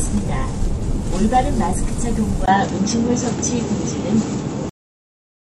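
At 2.46 s the sound goes dull after a 20 ms gap. Nothing passes above 7.6 kHz, with a faint new noise floor, likely an input switched to a poorer device. At 4.69 s a brief blip marks damaged data in a compressed stream, where the decoder lost sync.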